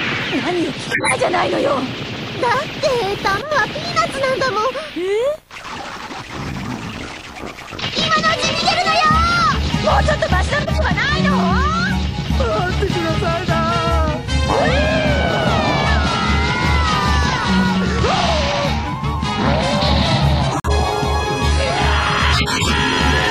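Corrupt frames were decoded despite flipped bits, spraying misplaced energy heard as chirps, squeaks, blips or bursts of noise, at 0.87–1.14 s, 10.62–10.81 s and 22.32–22.73 s. One corrupt frame muted event, where rejected frames were replaced with silence, leaves an abrupt hole from 20.51 to 20.72 s, which fits a few frames' length.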